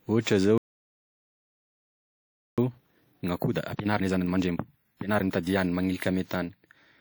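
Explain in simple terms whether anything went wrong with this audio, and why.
A few things went wrong here. At 0.58 s the speech just stops dead for two seconds, until 2.58 s. That's a playback stall: the player most likely ran out of data or got held up, so it went quiet until it could carry on.

Right after, from 2.58 s to 5.58 s, the speech rushes along at about one and a half times normal speed without the pitch going up. That's time-compressed catch-up. The player trims and blends tiny slices to work off the backlog the stall left.

Across the whole clip, the speech also carries leftover compression flaws that a big file shouldn't have. That points to low-bitrate audio saved at a high bitrate. It was most likely squeezed hard by an older codec first and then saved again as a high-quality MP3. The second save can't bring back what the first one threw away.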